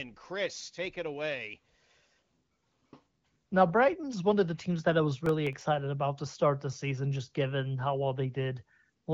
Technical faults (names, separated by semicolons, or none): processor overload crackle